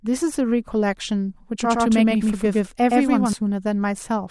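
From 1.61 s to 3.33 s the speech turns into a slapback double: a second, equally loud copy trails about a tenth of a second behind, dry and full-band, starting and stopping abruptly. This doubled audio track is likely a second, slower capture path mixed in.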